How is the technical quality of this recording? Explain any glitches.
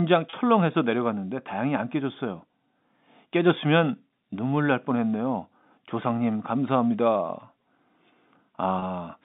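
Two short glitches from packet loss with pitch repetition occur, at 0.30 to 0.33 s and 8.79 to 8.82 s, each lasting about 30 ms, which points to a single lost packet. The receiver bridged each gap by repeating the last pitch cycle, so the sound briefly holds with a slight buzz instead of dropping out. The audio comes through a telephone-band G.711 channel, which limits it to about 150 Hz to 3.7 kHz.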